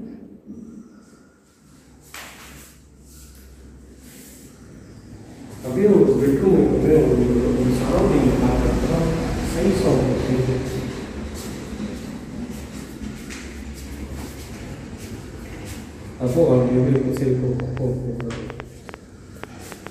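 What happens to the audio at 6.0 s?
Nothing goes wrong at 6.0 s; the audio plays through that moment intact, with no dropout, click or distortion.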